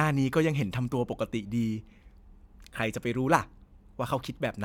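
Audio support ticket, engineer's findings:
Nothing stood out on listening; no faults found in the speech.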